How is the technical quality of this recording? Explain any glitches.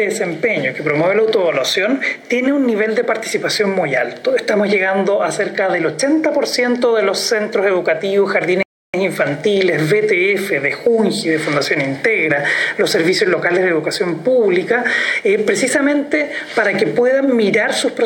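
One glitch stands out: a playback stall from 8.63 to 8.94 s. The player likely ran short of data or had its thread blocked, so the output cut to silence for 0.31 s before the sound resumed.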